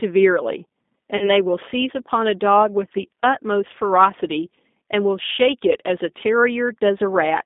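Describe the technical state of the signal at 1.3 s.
At 1.3 s you're inside a stretch of VoIP packet loss concealed by the speech codec, running 1.17 to 1.32 s. About 40 ms went missing, which fits two lost packets, and the decoder extrapolates and fades, leaving a weak smear of buzzy tone or coloured noise. Underneath, the G.729 codec runs throughout: its 8 kbit/s model rebuilds the sound within a 200 Hz to 3.6 kHz band, giving a plainly rough, synthetic edge.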